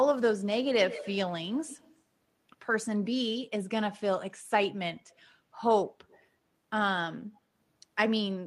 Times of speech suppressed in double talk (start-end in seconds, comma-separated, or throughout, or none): none